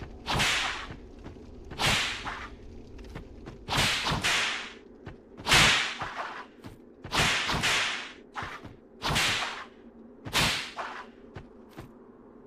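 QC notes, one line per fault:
No technical faults are audible anywhere in the clip, and the signal holds steady and continuous with nothing that calls for attention.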